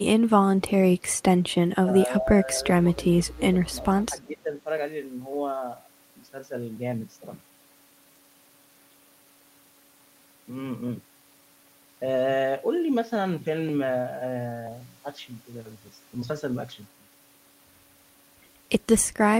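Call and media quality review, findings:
Speech suppressed in double talk, 1.10–1.16, 1.86–2.56, 2.79–2.88, 3.17–3.63 and 4.28–4.50 s. Level dips of roughly 10 dB, one near 25 dB at 2.79 s. Likely the echo canceller treating near-end speech as echo and attenuating it.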